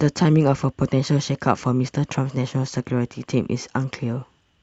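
No technical faults occur anywhere in this speech, which comes through an ordinary call path.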